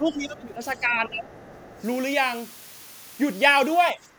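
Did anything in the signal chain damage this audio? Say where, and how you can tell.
Yes. At the sample-format conversion stage, low bit depth with dither leaves a steady hiss about 20 dB below the speech, consistent with 7-bit rounding. A spectrogram shows a flat, even noise floor throughout.

In call processing, the speech is suppressed in double talk from 0.0 to 1.33 s (drops up to about 15 dB) and 3.92 to 4.03 s (about 10 dB). The likely cause is an echo canceller ducking everything, which shows as sagging waveform envelopes.

The other side's voice leaks through at 0.79 to 0.97 s (about 30 dB down) and 1.16 to 1.82 s (about 25 dB down), likely from incomplete echo cancellation. It appears as faint, separate harmonic traces.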